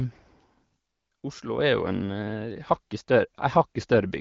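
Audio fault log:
0.76 to 1.58 s, one channel drops out: the speech abruptly falls about 6 dB quieter for roughly 0.8 s, then snaps back. That's likely one side of the stereo pair vanishing, so the mono sum loses half of what both channels shared.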